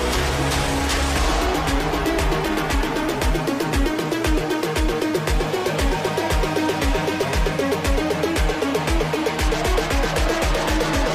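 No technical faults can be heard anywhere in the audio.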